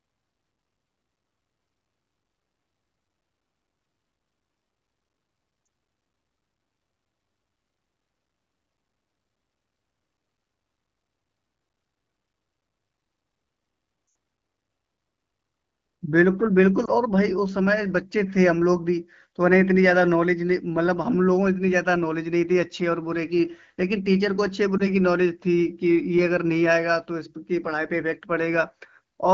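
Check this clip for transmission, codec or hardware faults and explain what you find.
The clip has lost AMR speech frames at 5.65 s, 14.07 to 14.15 s, 16.85 to 16.90 s and 24.77 to 24.86 s. The AMR wideband (HD Voice) codec is heard at a clear 12.65 kbit/s.

Lost AMR speech frames: corrupted frames fail their checksum, so the decoder repeats the last good pitch and vocal tract settings at falling gain. The 5.65 s and 16.85 s events sound like brief dips or warbles. The 80 ms gap at 14.07 s, which fits a run of about four frames, drops to near silence within two frames. On a spectrogram, harmonics stretch flat and then dim. The waveform's envelope sags before recovering rough.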